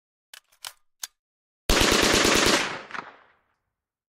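No technical faults can be heard anywhere in this audio. Nothing in the chain stands out as having gone wrong at any point.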